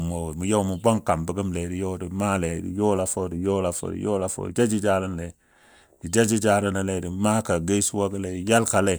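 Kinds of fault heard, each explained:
No technical faults can be heard anywhere in the recording, and the signal stays steady and intact throughout.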